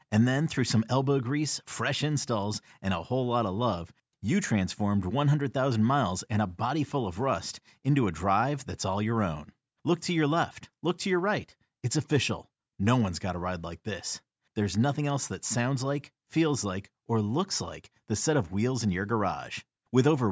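Nothing here calls for comment, as the speech runs along without a single technical fault turning up anywhere in the recording.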